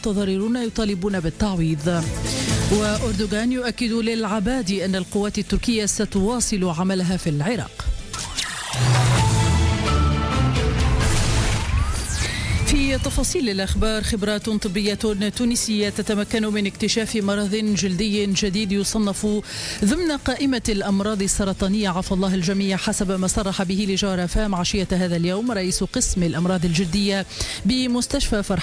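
No technical faults are audible.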